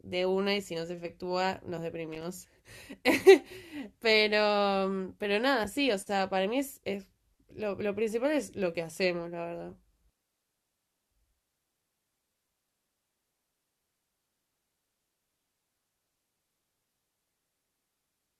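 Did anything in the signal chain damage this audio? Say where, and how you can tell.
Yes: loose connector crackle in the analogue wiring, from 2.12 to 2.24 s of the speech. A worn contact making and breaking chops the signal into an irregular scratchy burst. The waveform shows ragged dropouts with sharp spikes, and the spectrogram shows scattered broadband vertical streaks.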